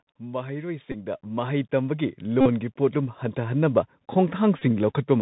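Throughout, the speech is narrow and muffled, with scratchy s sounds and a granular hiss riding underneath. This is the Bluetooth CVSD headset codec: a one-bit up-or-down encoder whose adaptive step cannot keep pace with loud, bright sounds. Nothing above 4 kHz survives, which fits a 64 kbps headset link.

From 0.17 to 3.83 s, voice and background swell together by about 14 dB. This is automatic gain rising, where the gain control judged the input too quiet and turned it up gradually over several seconds.

At 0.92 to 0.94 s (about 19 ms), 2.41 to 2.48 s (about 49 ms) and 4.59 to 4.62 s (about 23 ms), a short buzz near 267 Hz appears. Each is a Bluetooth headset packet repeated: lost packets were replaced by re-decoding the previous one every 3.75 ms.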